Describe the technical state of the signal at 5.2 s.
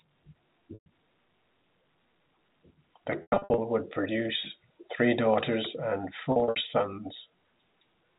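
At 5.2 s the speech is intact, with no fault at that moment; it carries the narrow, 4 kHz-limited sound of G.711 telephone coding.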